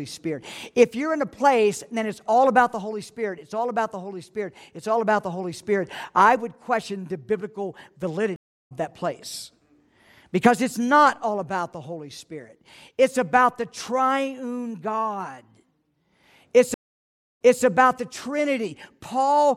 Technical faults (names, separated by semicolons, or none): stream reconnect